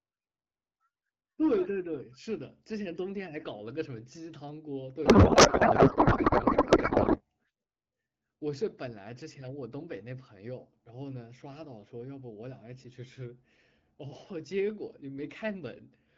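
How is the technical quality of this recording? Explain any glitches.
The recording has one clear fault, a codec payload misread from 5.05 to 7.22 s. The speech is replaced by garbled noise and warble that barely tracks it. The AMR payload was likely packed octet-aligned but read as bandwidth-efficient, so every field lands in the wrong bit position and the decoder synthesises nonsense from misplaced parameters. Around it, the AMR wideband (HD Voice) coding sounds clear, consistent with about 12.65 kbit/s.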